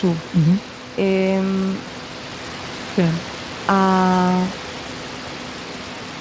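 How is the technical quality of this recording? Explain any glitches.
No technical faults are audible.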